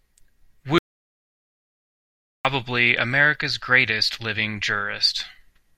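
At 0.78 s the speech cuts off abruptly and stays in total silence until 2.45 s, about 1.67 s lost: an audio dropout to silence, likely from the input briefly disconnecting or muting. The waveform flatlines, and the spectrogram shows a fully blank band with no room tone.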